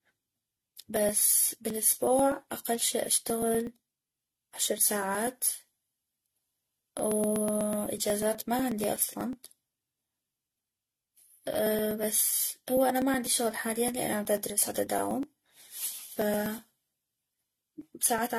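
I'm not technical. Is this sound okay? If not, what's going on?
No. The speech sounds swirly, hollow and smeared, and the sharp starts of sounds are blurred. Nothing above about 14 kHz survives. This is generation loss. The audio was likely compressed and saved over and over, maybe ten times.

There are also periodic USB or driver dropouts. From 0.10 s to 18.31 s, a tiny slice of about 2 ms goes missing every 0.123 s, roughly eight times a second. The audio simply skips ahead, so you hear a steady ticking whenever there is sound.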